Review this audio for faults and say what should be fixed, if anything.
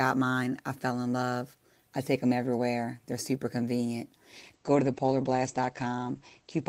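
From 4.32 s to the end of the clip at 6.69 s, about 2.37 s, the speech suffers a call bitrate drop. The top end collapses from full band to about 8 kHz, and the sound turns coarse and muffled, which fits the encoder being forced from around 32 kbps down to roughly 12 kbps after the bandwidth estimate fell. Unlike packet loss, there are no gaps or stutters, and unlike a fixed low-pass filter, the coding roughness arrives together with the lost highs. To prevent it, tune the bandwidth estimator so it cuts bitrate more gradually and recovers sooner.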